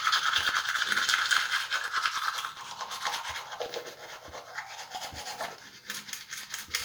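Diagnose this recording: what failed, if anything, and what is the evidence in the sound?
The failure is at the driver or buffer stage: periodic USB or driver dropouts. From 0.10 s to 6.73 s, regular ticks repeat every 0.099 s, around seventy in all. Each time, about a millisecond of audio is skipped because a recurring task stalls the transfer.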